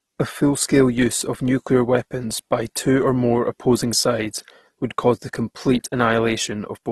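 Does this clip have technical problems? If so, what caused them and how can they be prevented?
Yes. Throughout the speech there is likely transcoding between lossy codecs: the audio was encoded once and then re-encoded. The sound fits a 48 kbit/s AAC-LC pass followed by a 16 kbit/s Opus pass. The second encoder spends its small bit budget reproducing the first one's artefacts and adds its own, so both sets of artefacts are heard together. Nothing survives above 12.4 kHz. To prevent this, encode once from the original source at the final bitrate.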